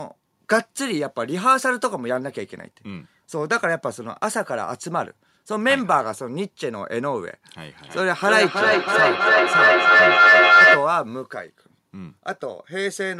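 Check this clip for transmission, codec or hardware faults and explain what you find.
One transmission fault: feedback echo between two devices, from 7.67 to 11.01 s. Two devices in the same room are joined to the call, and one plays out what the other's microphone sent; that microphone hears it and sends it back, and neither echo canceller removes sound played by the other device. The speech returns at roughly 300 ms intervals, and because the loop gain is high the repeats build rather than fade, peaking about 9 dB above the speech itself.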